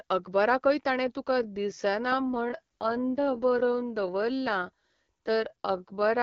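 Right after "अकबराकय ताणें", at 1.25 s, the pace abruptly slows to about 0.66 times normal speed and stays there to the end, while the pitch holds steady. The slowed speech drags. This is likely a time-stretched section, where software lengthened the audio by repeating short pieces. On a spectrogram, harmonics keep their spacing but syllables and formant transitions stretch wider in time, and the waveform shows drawn-out, repetitive envelope shapes.

Within that slowed stretch, from 2.21 to 3.63 s, there is an AMR rate drop: the AMR wideband stream, which is lightly coloured at 12.65 kbit/s elsewhere, falls to 8.85 kbit/s and then recovers. The band stays the same and there is no gap, but the speech turns rougher and more synthetic. A spectrogram keeps its top edge near 7 kHz, with grainier, less defined harmonic detail over that span.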